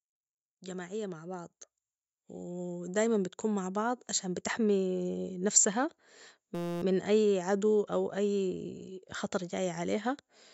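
From 0.65 to 1.59 s the speech and its background swell together by about 4 dB, then again by about 6 dB between 2.32 and 4.52 s. This is automatic gain rising: the gain control judged the input too quiet and gradually turned it up.

At 6.55 s, for 0.27 s just before "من أي عدو أو", a steady buzz at 172 Hz interrupts the speech. It is a system hang loop: while the computer or driver stalled, the sound hardware replayed one 5.8 ms stretch of audio 47 times, which fits a 256-sample buffer.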